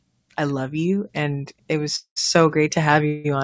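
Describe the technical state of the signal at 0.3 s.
At 0.3 s the speech is intact, with no fault present, only the ordinary coding texture and the missing content above 8 kHz that come from its pass through a G.722 call path.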